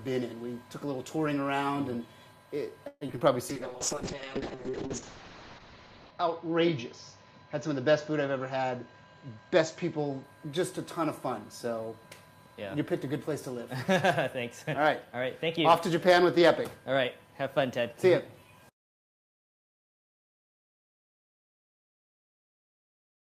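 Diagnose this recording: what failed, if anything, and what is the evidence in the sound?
Network stage: repeated packet loss (robotic sound) from 2.87 to 3.22 s. Five gaps, longest 137 ms, are patched by extending earlier sound. Nearly half is concealed, so it turns choppy.

Codec stage: a call bitrate drop from 3.50 to 10.30 s. The encoder falls from 48 to 6 kbps, and bandwidth shrinks from 20 kHz to 8 kHz. The result is coarse, muffled sound.

Buffer stage: a jitter buffer speed-up from 8.56 to 9.85 s. About 150 ms of short pitch-period pieces are cut. Playback runs at 109% speed, hurried but unchanged in pitch.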